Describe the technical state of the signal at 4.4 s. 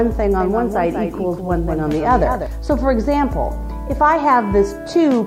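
Nothing is wrong with the signal at 4.4 s; it runs through that moment intact, with no dropout, click, distortion or other fault to be heard.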